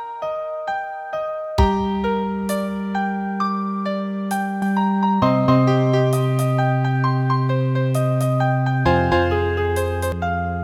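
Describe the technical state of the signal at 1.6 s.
At 1.6 s the signal is intact, with no audible fault at that moment.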